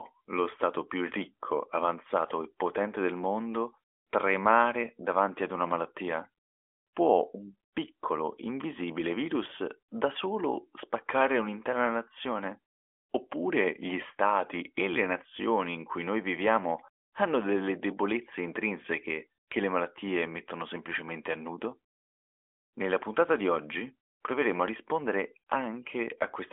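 Nothing in the recording stood out as a technical fault on listening.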